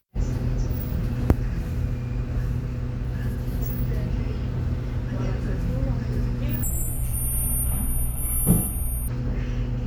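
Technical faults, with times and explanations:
6.63 to 9.08 s, stereo read as mono: interleaved left and right samples play as one channel. The sound drops to half speed, an octave lower, with a faint mirrored image high up.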